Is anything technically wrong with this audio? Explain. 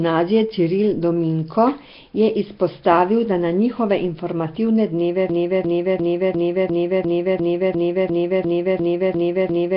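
Yes, two faults. Throughout, the speech has a rough, hissy halo, a smeared underwater quality, and nothing above 5.3 kHz. This is likely Nellymoser compression: starved bands are refilled with noise, which gives hiss rather than the metallic warble of other low-rate codecs.

From 5.30 s to the end, a broken-record loop repeats the same 0.35 s fragment about 13 times. The repeats are exact and never decay, unlike an echo, and the speech that should follow is lost.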